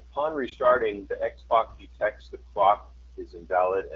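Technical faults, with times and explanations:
Throughout: AMR wideband (HD Voice) codec. The speech has passed through a low-rate AMR-WB encoder, and the plainly audible roughness fits the 8.85 kbit/s mode, one of its two lowest. At that rate the pulse-driven vocal tract model has too few bits to rebuild the waveform, so the speech sounds raspy and gritty. The top band from 6.4 to 7 kHz is filled with shaped noise rather than real detail.
0.49 to 0.55 s: lost AMR speech frame. A radio error corrupted the data so a frame failed its checksum, and the brief gap fits a single lost 20 ms frame. The decoder filled the hole by reusing the last good pitch and vocal tract settings at reduced gain, giving a short dip or warble in the speech. Because wideband concealment fades quickly, the sound drops briefly and then resumes weak or rough for a moment.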